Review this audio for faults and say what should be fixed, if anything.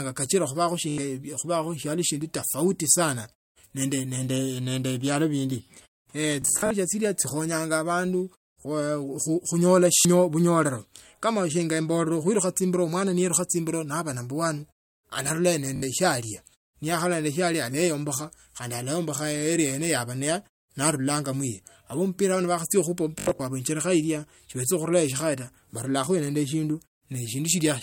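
Bluetooth stutter at 0.90, 6.42–6.71 (between "nende bialo bindi ne" and "chino chikhonyanga abandu khunyola"), 9.97, 15.76 and 23.19–23.40 s: late packets made the receiver repeat its last slice, up to about 200 ms lost, with a buzzing repeat and a skip forward, unlike a plain dropout gap. Keeping the transmitter close and clear of 2.4 GHz interference would prevent it.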